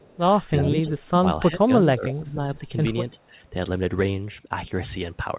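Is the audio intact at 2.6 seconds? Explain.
No. From 2.55 to 2.68 s the speech is briefly turned down by roughly 5 dB, a short dip of a little over a tenth of a second, consistent with speech suppressed in double talk. The likely cause is an echo canceller that, with both ends active at once, could not tell the near talker from loudspeaker echo and attenuated everything. The band-limited sound, with nothing above 4 kHz from the call codec, continues through the dip.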